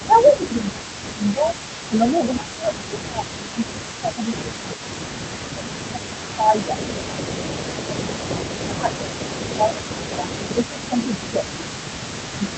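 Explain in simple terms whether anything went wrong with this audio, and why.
The speech keeps dipping and thinning out at 0.0–1.55, 1.89–5.01, 5.53–6.81, 7.39–8.42, 8.64–10.99, 11.18–11.83 and 12.28–12.55 s. This is likely speech suppressed in double talk: with both sides talking, the echo canceller turned down both its own talker and the echo.

Throughout the clip, a faint copy of the speech trails about 280 ms behind. This is an echo leak, likely from a loudspeaker whose sound was not fully removed and got sent back.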